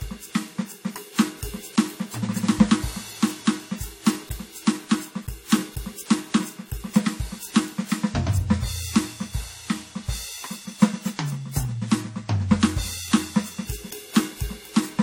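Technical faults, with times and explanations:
Throughout, transcoding between lossy codecs: the music likely passed through WMA then AAC, stacking both codecs' artefacts, with nothing above 16.6 kHz.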